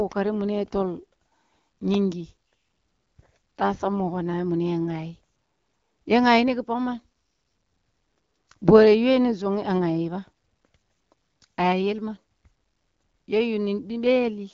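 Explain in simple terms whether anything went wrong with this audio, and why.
Nothing went wrong with this speech recording. It has the slightly narrowed sound of an HD Voice phone call, with nothing above 7 kHz, which fits the AMR wideband codec working as intended.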